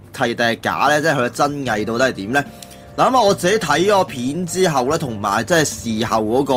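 Nothing stood out on listening to this audio.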